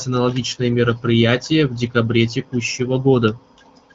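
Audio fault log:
No fault is present: the speech has passed through the AMR wideband (HD Voice) codec, which leaves nothing above 7.7 kHz, and its light coding texture suggests one of the codec's higher rates, near 15.85 kbit/s.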